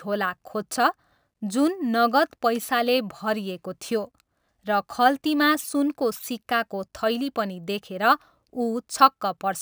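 Throughout the speech there is crude rate conversion. Samples were repeated rather than filtered, in a pattern that fits a 32 kHz to 48 kHz change. The resulting distortion sits roughly 25 dB below the speech and is heard as a gritty, inharmonic fizz tracking loud and sibilant sounds.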